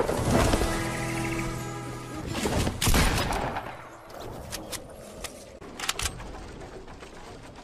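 At 2.15 s there is a repeated buffer. New audio did not reach the output in time, so the device replayed its last block three extra times. Each block is about 1.45 ms long, which fits a 64-sample buffer. The loops join hard, so the fault sounds like a short click or a tiny buzz, not a stutter. Roughly 4 ms of audio goes missing.

From 3.15 to 3.23 s there is damaged data in a compressed stream. Some of the encoded bytes there are wrong. The decoder misreads those frames, loses its place, and hunts for the next valid frame header. The result is a brief chirp, squawk, click or short hole lasting about 80 ms. It is not part of the sound itself.

At 4.05 s the repeated buffer fault comes back in the same form. The same block of about 1.45 ms plays three extra times. It gives the same sharp click or buzz and again drops about 4 ms.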